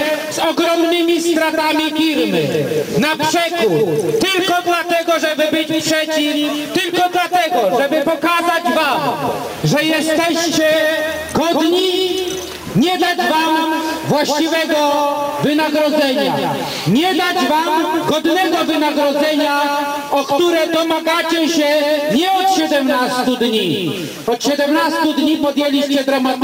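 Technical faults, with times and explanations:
throughout, stuck bit: A distortion rides on every louder passage, and the pauses are not silent but filled with a steady hiss-like noise. The likely cause is one data bit held fixed at 0 or 1 by a faulty line or converter. About half the sample values then land off by that bit's weight, in a pattern that follows the waveform. Near zero the error flips with the sign of the signal, which turns quiet gaps into noise.
throughout, gain pumping: The gain is pulled down each time a loud sound starts, with a swing of around 10 dB between the two states. Loud and quiet parts sit close together in level, giving a squashed, breathing character. The likely cause is input gain set far too high for the microphone, with a fast limiter or compressor pulling it back down on each loud onset and releasing it again once the sound falls away.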